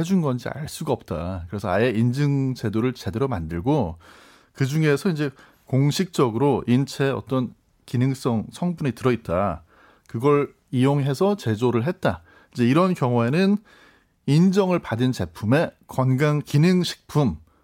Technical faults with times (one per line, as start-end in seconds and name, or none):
none